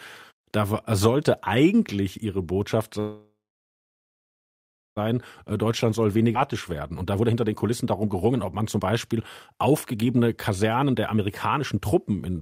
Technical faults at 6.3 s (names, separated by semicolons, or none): jitter buffer speed-up; skip ahead